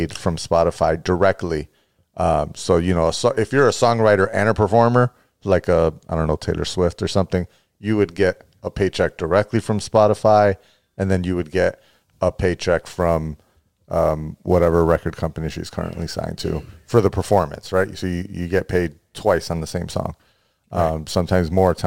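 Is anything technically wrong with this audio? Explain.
Yes, there is sample clock jitter. From 12.79 s, just after "you would get a", to the end, timing errors of around 7 microseconds add roughness about 30 dB below the speech. It grows on loud, bright sounds and vanishes in pauses.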